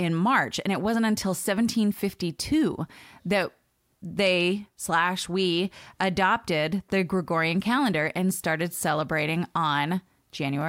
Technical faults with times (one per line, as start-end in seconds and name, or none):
none